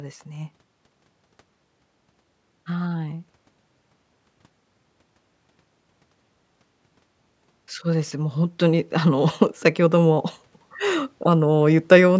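From 7.5 to 10.27 s, automatic gain rising lifts speech and background together by about 4 dB in a gradual swell, not a sudden step.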